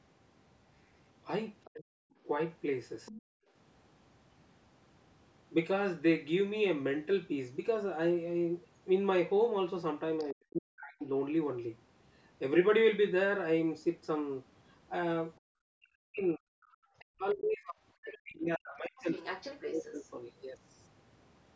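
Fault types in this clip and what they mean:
Other side's voice leaking through: a fainter second voice sits under the talker, about 20 dB down early on and much louder near the end, likely from uncancelled loudspeaker echo.
Speech suppressed in double talk: the talker's voice sinks by up to about 40 dB or breaks apart while the other side speaks, likely the canceller turning both down.
Background gated by the echo canceller: the room sound drops out by about 40 dB in brief gaps, because the canceller clamped the microphone hard while the loudspeaker was playing.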